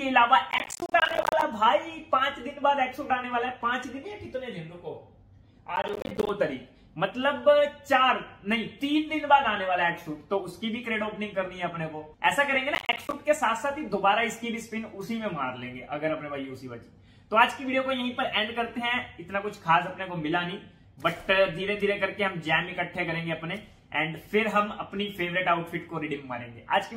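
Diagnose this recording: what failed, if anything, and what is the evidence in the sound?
Processor overload crackle at 0.51 to 1.42 s, 5.76 to 6.29 s and 12.75 to 13.13 s, a driver or buffer stage failure. In each burst the sound is torn by a dense run of hard-edged dropouts that stops abruptly when the load eases. The processor repeatedly failed to fill its audio buffers in time, which suggests buffers of around 10 ms. Each missed buffer became a short stretch of silence, and dozens of them in quick succession produce the gritty crackle.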